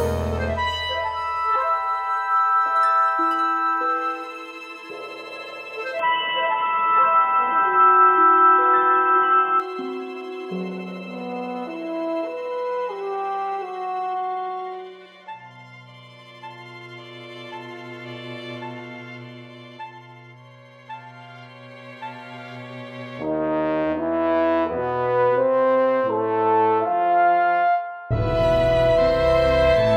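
At 5.99 s the sound suddenly turns dull and boxy, with no gap at the change, and stays that way until 9.6 s. The likely cause is an input switched to a poorer device. On a spectrogram everything above 3.8 kHz vanishes for that stretch, and a new noise floor roughly 30 dB below the signal appears. The waveform shows a level shift of around 5 dB until the original input returns.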